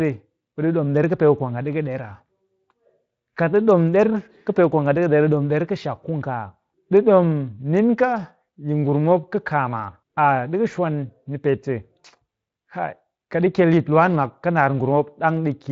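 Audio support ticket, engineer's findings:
Nothing stood out on listening through this speech clip; the Speex path sounds as expected, with content reaching up to about 7.6 kHz and nothing above.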